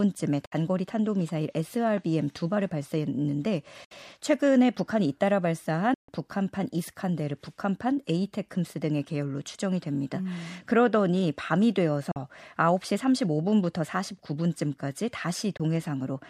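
The speech cuts to silence at 0.45, 3.84, 5.94, 12.11 and 15.57 s, for about 61, 61, 142, 41 and 20 ms. These are likely Bluetooth dropouts, where late packets get discarded. Each gap has abrupt edges or a fade of a few milliseconds, and the audio picks up further along, as if it had kept playing.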